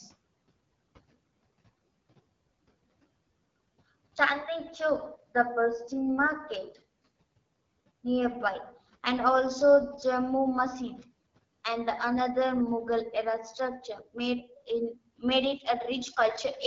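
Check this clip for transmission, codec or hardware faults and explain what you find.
Two faults are audible: plainly audible low-rate wideband codec damage across the whole clip, and a brief cut from the noise suppressor near the end.

The AMR wideband (HD Voice) codec is present from start to finish, and its damage is plainly audible. AMR-WB rebuilds the lower band from a pulse-excited vocal tract model and fills the top band with synthetic shaped noise. Nothing reaches past 7.5 kHz. The rough, raspy grain points to one of its lowest modes, likely 8.85 kbit/s, where too few pulses carry the voice.

Speech cut by the noise suppressor occurs between 14.43 and 14.69 s. The suppressor took part of the speech for background and pulled it down by about 11 dB, over roughly a tenth of a second in total. The room noise sits about 28 dB under the speech. The affected sounds come out swallowed and faint, dipping with the background instead of standing above it.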